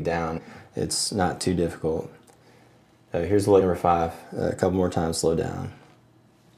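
At 0.37 s and again at 3.60 s the audio lurches forward, leaving a short smeared blip at each join rather than a sharp click. These are compressed frames skipped: whole blocks of encoded audio were never played, either missing from the file or rejected by the decoder as damaged. The first jump loses roughly 100 ms (about four frames) and the second roughly 70 ms (about three), steps that fit a frame length of about 23 ms. The overlap between neighbouring frames blurs each seam into that brief smudge.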